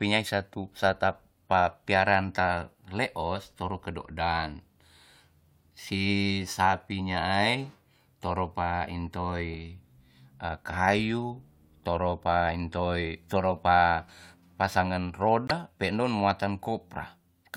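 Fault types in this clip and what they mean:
Corrupt frame muted: the decoder rejected a damaged compressed frame and silence replaced it, leaving an abrupt 34 ms gap, about one frame long, in the speech at 15.48 s.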